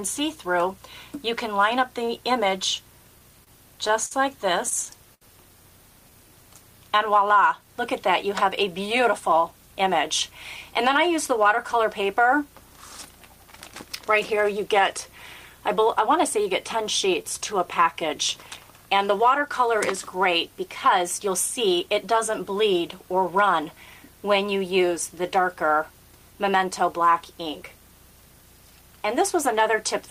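The audio has jitter-buffer timing faults. Repeated stalls (stutter) between 3.44 and 5.23 s are six brief hold-ups, the longest 73 ms, where the buffer ran dry and the last sound was stretched to fill 183 ms. Nothing is lost, so it drags rather than dropping out. A jitter buffer speed-up at 8.42–9.94 s and again at 20.26–22.05 s runs the audio at about 105–106% as the receiver trims roughly a tenth of a second of pitch periods. Pitch stays unchanged, unlike a resampling error. A jitter buffer slow-down at 16.62–18.16 s repeats pitch periods to add 101 ms, running at 94% with drawn-out sounds but no pitch drop.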